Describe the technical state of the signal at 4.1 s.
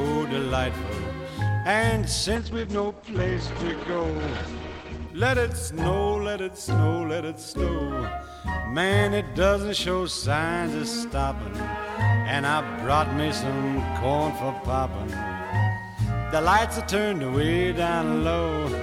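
At 4.1 s the call is in a bitrate drop running from 2.36 to 5.15 s. The bandwidth estimate collapsed and the encoder was pushed to a far lower rate, which fits a fall from around 128 kbps to roughly 11 kbps. It stays near the bottom for about 2.7 s in all. The codec quantises coarsely and narrows its audio band from 20 kHz to 8 kHz, so the sound is dull, muffled and grainy.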